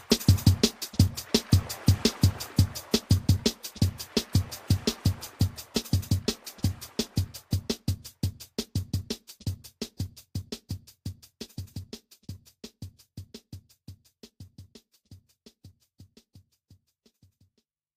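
Two devices in the chain are likely running on separate, unsynchronised clocks, drifting apart by something on the order of 50 ppm, so a single sample is dropped or repeated each time the difference builds to a whole sample. That produces clock slip clicks from about 0.25 s to 17.59 s, around forty faint, evenly spaced ticks roughly every half second, most noticeable on loud, high or sustained passages and absent where the audio falls silent.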